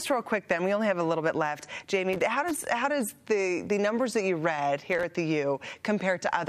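Audio with two bursts of loose connector crackle, from 2.13 to 2.65 s and again from 4.92 to 5.03 s. A worn or dirty contact is making and breaking, chopping the signal into irregular scratchy fragments, with pops wherever DC on the line switches abruptly.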